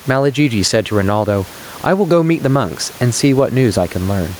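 Gain pumping runs through the whole speech clip. The swing is around 10 dB. Loud and quiet passages sit closer together than they should, so the sound feels squashed. The likely cause is a microphone gain set far too high, with a fast limiter clamping down on each peak and letting go between them. The room noise sits about 32 dB under the speech.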